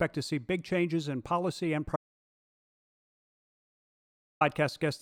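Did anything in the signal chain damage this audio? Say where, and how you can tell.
Yes: an audio dropout to silence, 1.96 to 4.41 s, likely a lost input link. The waveform flatlines to silence, the spectrogram goes blank, and no room tone remains.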